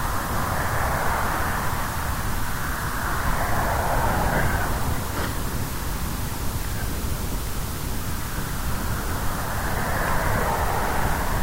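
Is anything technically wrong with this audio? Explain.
Yes. Throughout the clip there is low bit depth with dither: the audio sits on about 5 bits, with dither added before rounding, so the quantization error becomes a steady, even hiss only roughly 10 dB below the signal, without distortion. A spectrogram shows a flat, full-band noise floor; the waveform looks fuzzy everywhere.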